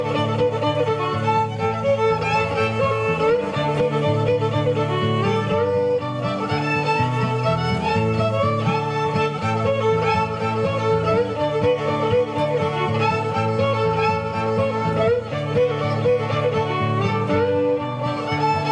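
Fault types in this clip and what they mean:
No dropouts, clicks, distortion or level problems are audible anywhere in the recording.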